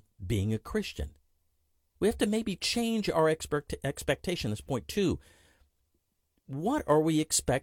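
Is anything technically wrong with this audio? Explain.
No, nothing technically wrong stood out on listening to this speech recording.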